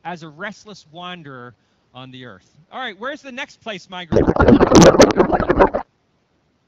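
From 4.11 s to 5.86 s there's a codec payload misread: the far end is packing its AMR-WB frames octet-aligned, but this end unpacks them as bandwidth-efficient, so every field lands a few bits off. The speech turns into garbled warble and noise that barely tracks it, then snaps back at 5.86 s once the framing agrees again. Either side of that, the AMR wideband stream sounds clean, consistent with around 12.65 kbit/s.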